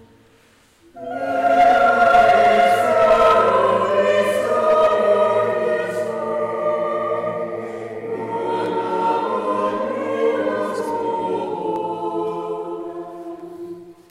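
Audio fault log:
8.66 s, 11.76 s and 13.40 s: dropped samples. Each is a single sharp click, a thin vertical line across the spectrum. The likely cause is a fraction of a millisecond missing from the stream, so the waveform jumps to a later value. Unlike a dropout, no sound goes silent.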